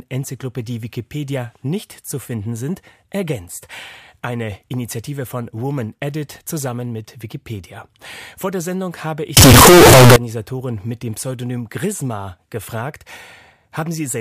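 Right after "habe ich", from about 9.37 to 10.16 s, the speech suddenly turns into a blast of harsh, square-ish buzz sitting at an almost fixed, high level. Quiet and loud parts come out equally loud, so the background noise jumps up to match the speech, though you can still follow the pitch. That's the classic float read as integer fault, most likely 32-bit float samples being read as 32-bit integers, so sign and exponent bits dictate the level.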